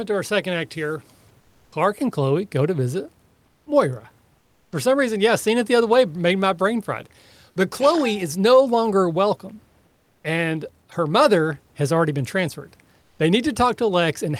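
In five pauses, at 1.40–1.72 s, 3.46–3.66 s, 4.38–4.72 s, 9.86–10.24 s and 13.02–13.19 s, the real background drops out and there's comfort noise in place of the background. It's a flat, featureless hiss about 3 to 5 dB quieter than the room noise it replaces, which otherwise sits about 41 dB under the speech. The likely cause is discontinuous transmission, with behaviour that fits Opus DTX: the sender goes quiet when it hears no speech, and the receiver fills the gap with synthetic noise.

Right at the end of the third gap, around 4.70 s, there's an onset clipped by the voice detector. The sender was likely slow to notice the sound had come back, so roughly the first 20 ms never arrived. That speech starts abruptly, straight out of the comfort noise, without its soft lead-in.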